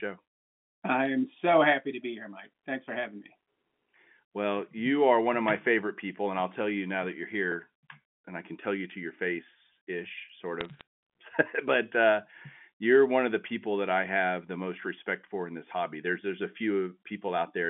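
At 1.05 s, just before "am so happy to", bit errors on the digital phone line flip single samples. Flips on high bits or on the sign of loud samples make sharp ticks. Another burst from 10.61 to 10.81 s adds brief crackle.

Two blocks of digital silence cut the audio out with no fade. At 7.52 s, after "you now that you're", a 0.73 ms gap gives a tick or dip. At 10.29 s, after "to your face ish", a 2.9 ms gap also gives a tick or dip. These fit missed buffer deadlines.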